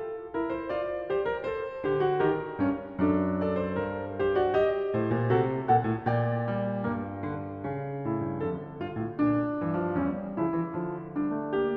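No technical faults are audible in this music.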